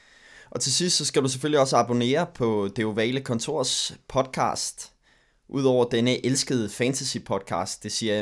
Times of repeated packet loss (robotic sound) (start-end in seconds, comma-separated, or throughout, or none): none